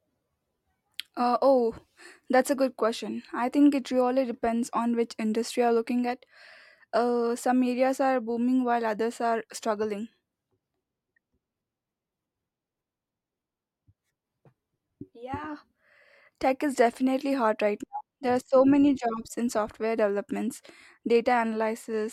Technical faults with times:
none

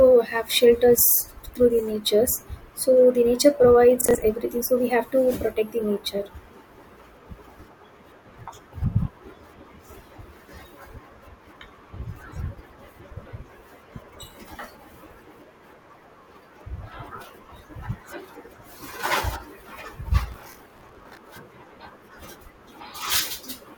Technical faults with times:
4.01-4.15 processor overload crackle
20.32-21.17 processor overload crackle

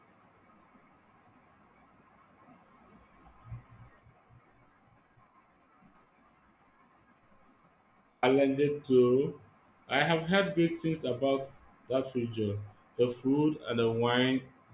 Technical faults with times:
none

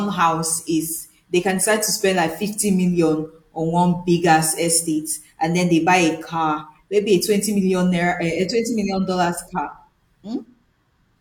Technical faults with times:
none

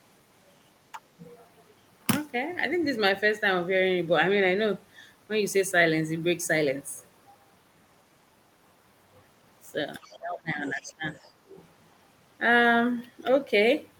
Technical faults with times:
0.92-1.01 speech suppressed in double talk
1.19-1.31 other side's voice leaking through
10.04-10.19 other side's voice leaking through
10.05-11.05 speech suppressed in double talk
10.67-10.79 other side's voice leaking through
11.07-11.68 other side's voice leaking through

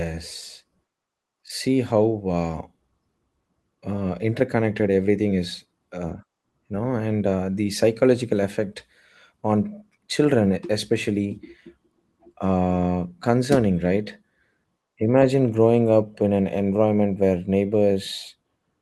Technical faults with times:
0.00-18.81 clock drift between sender and receiver
0.05-18.80 repeated timing corrections

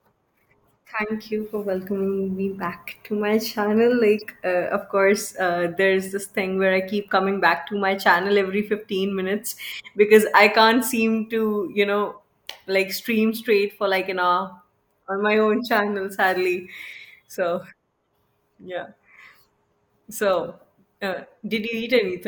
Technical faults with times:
4.18-4.23 corrupt frame decoded

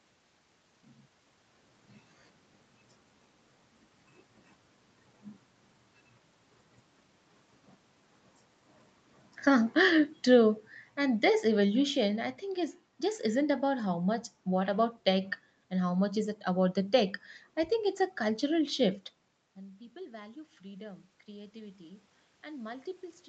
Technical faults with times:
9.48-12.34 automatic gain falling
19.54-23.29 automatic gain rising

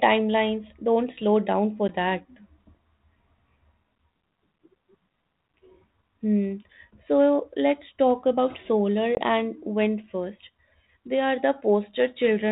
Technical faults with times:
1.88-1.92 packet loss on an ADPCM call
9.15-9.19 packet loss on an ADPCM call

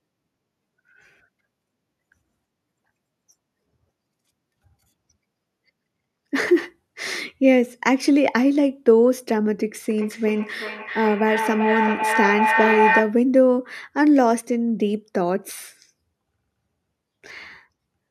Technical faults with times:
9.90-13.23 feedback howl

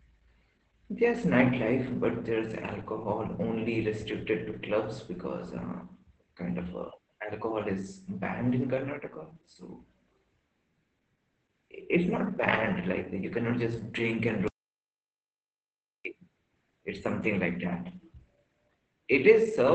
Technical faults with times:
0.00-19.74 Opus voice compression
14.48-16.05 audio dropout to silence

